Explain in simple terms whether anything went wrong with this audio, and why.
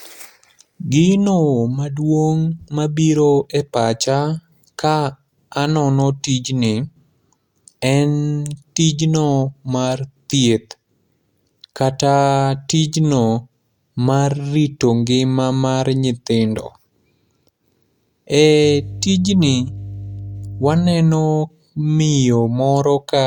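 Yes, something went wrong. From 18.64 to 20.93 seconds, a steady low buzz sits under the speech. This is mains hum, a 50 Hz tone from the power supply. It probably leaked in through a ground loop or a nearby transformer. It is fairly loud.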